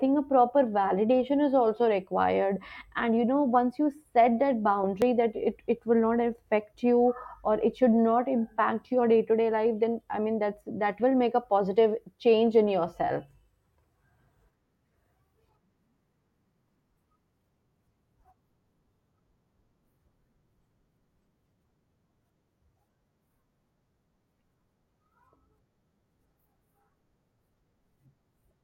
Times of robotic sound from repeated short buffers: none

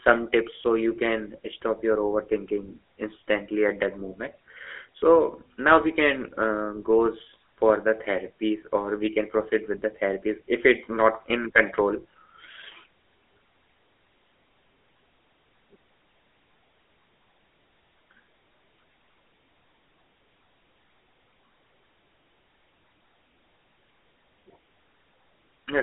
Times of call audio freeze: none

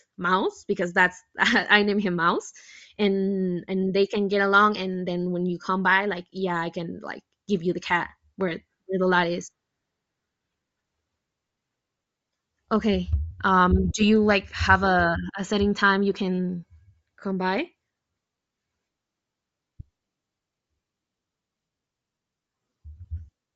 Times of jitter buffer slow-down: none

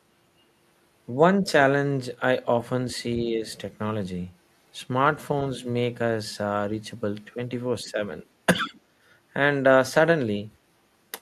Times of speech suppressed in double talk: 3.24-3.44, 7.84-7.99, 8.64-8.74

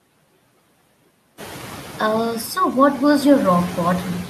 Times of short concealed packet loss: none

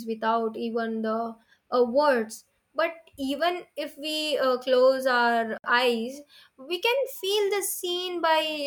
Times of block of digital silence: 5.58-5.64

